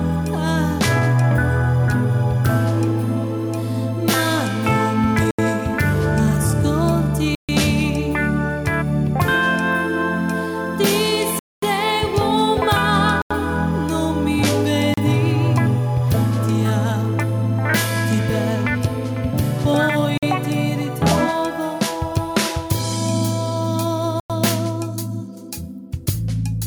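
Seven abrupt cuts to silence at 5.31, 7.35, 11.39, 13.22, 14.94, 20.18 and 24.20 s, lasting 35 to 233 ms, are likely Bluetooth stalls, where the headphone buffer emptied while waiting for resent packets. Both the waveform and the spectrogram show clean, hard-edged blank gaps.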